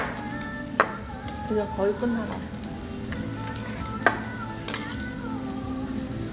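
No technical faults are audible anywhere in the recording.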